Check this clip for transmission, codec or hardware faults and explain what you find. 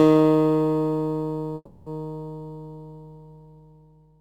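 There's one transmission fault here, a call audio freeze from about 1.55 to 1.89 s. The sound stalls and the last bit gets stretched into a fading buzz for roughly 310 ms, then about 20 ms of near-silence before it picks up again. That pattern is most likely packets arriving late and the jitter buffer running dry. The audio resumes right where it left off, so nothing's lost, but everything after lands about 310 ms later.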